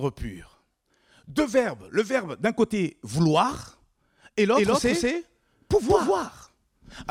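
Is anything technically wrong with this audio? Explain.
Yes. From 4.55 s, just after "d'un côté vouloir et", a doubled audio track runs to the end: a second copy of the speech enters abruptly, about a fifth of a second behind and at about the same level, likely from a slower capture path. The waveform shows every syllable repeated, and the spectrogram shows a full-band shifted duplicate with no decay.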